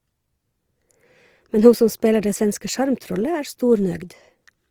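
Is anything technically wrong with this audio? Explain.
Yes. Two compression faults are audible in this speech clip.

Opus compression runs through the whole clip, and the damage is plainly audible. The high band stays open to full bandwidth, but the sound is rough, grainy and noisy rather than clean. That texture is most likely the Opus music (CELT) mode short of bits. It keeps each band's energy but fills the detail with folded or noise-like content, which fits a low bitrate around 24 kbps.

Pre-echo occurs at about 2.21 s, between "ho som" and "det svenske". A brief hiss, roughly 17 ms long, comes just ahead of a sharp onset, and the onset itself sounds softened. The codec spread its quantisation noise across the whole transform block, so noise scaled to the loud attack also leaked into the quiet gap before it.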